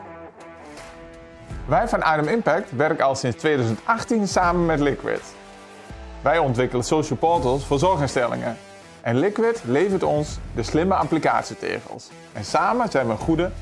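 No technical faults can be heard anywhere in this recording; the signal stays continuous and steady throughout.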